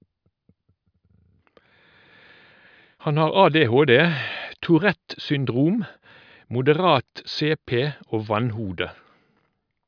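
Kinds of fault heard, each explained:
No technical faults detected.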